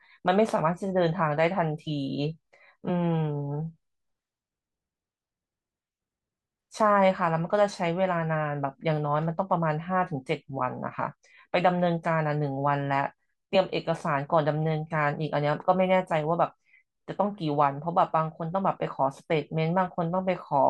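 A corrupt frame was decoded at 1.87 to 1.90 s in this speech recording. Bits inside a couple of compressed frames were damaged, yet the decoder still played them. Misread gain values and codes put energy at frequencies where the speech has none. The result is a short, chirpy burst of noise lasting about as long as those two frames. It peaks at around -30 dBFS, so it is quiet.

Compressed frames were skipped at 13.54 to 13.56 s. A stretch of the encoded stream was never played, either because it was missing or because the decoder rejected it as damaged. The speech jumps ahead by about 20 ms.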